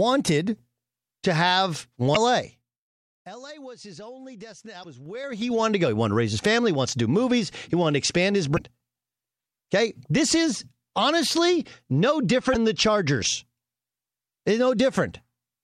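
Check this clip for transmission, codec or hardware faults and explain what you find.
Two kinds of fault appear in the speech: damaged data in a compressed stream, and zipper noise during two level changes.

Damaged data in a compressed stream occurs four times: 2.13 to 2.17 s, just after "to have"; 4.81 to 4.85 s, just after "his only destination"; 8.56 to 8.60 s; and 12.52 to 12.56 s. Each lasts about 40 ms. Corrupted bytes make the decoder misread or reject frames, lose sync and hunt for the next frame header, producing a chirp, squawk, click or short hole. Unlike zipper ticks, each is a single isolated disturbance, not tied to any level movement.

Zipper noise runs from 2.44 to 2.93 s, as the level falls by roughly 20 dB in 3 dB steps at about 15 steps per second. It returns from 5.01 to 5.61 s, just before "to go", as the level rises by roughly 20 dB in 3 dB steps at about 10 per second. 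Each unsmoothed jump in gain puts a small click in the waveform. The result is a regular ticking that rides on the speech only while the level is moving, which separates it from the one-off bursts of stream damage.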